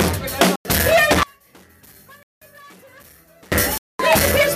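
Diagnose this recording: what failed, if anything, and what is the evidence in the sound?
Driver or buffer underruns. Blocks of digital silence at 0.56, 2.23 and 3.78 s last 93, 186 and 216 ms. The first two fit 4096- and 8192-sample buffers.

From 1.23 to 3.52 s the sound drops about 31 dB. The likely cause is one channel inverted in the wiring, cancelling when summed to mono.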